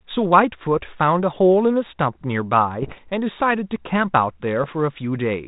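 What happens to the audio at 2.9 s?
Pops and rough, crackly bursts with brief jumps in level break through the speech from 2.82 to 2.98 s. These are bit errors on an ADPCM link, here a 32 kbit/s G.726 path, at roughly one bit in a hundred. Each flipped bit knocks the decoder's step size and predictor off track, so every error rings on for some milliseconds instead of vanishing at once.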